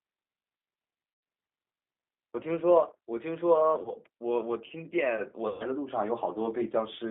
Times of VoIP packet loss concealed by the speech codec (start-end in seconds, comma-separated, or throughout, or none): 1.14-1.23, 3.83-3.93, 5.48-5.65